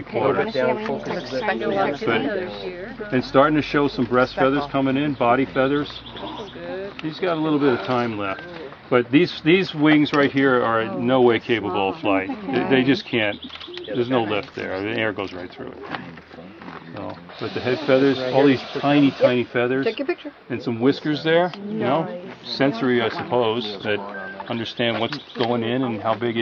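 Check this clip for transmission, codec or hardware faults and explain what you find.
No transmission, codec or hardware faults.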